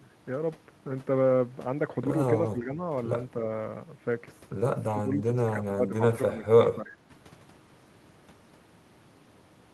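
Speech suppressed in double talk dips the level at 2.53 to 2.8 s by about 10 dB, then more heavily from 4.92 to 6.02 s, down by about 20 dB, with shorter dips of about 15 dB at 6.27 to 6.46 s and 6.74 to 7.11 s. The echo canceller likely mistook the talker for loudspeaker echo while both sides spoke. Unlike packet-loss dropouts, the sound sinks in uneven stretches rather than vanishing abruptly into silence.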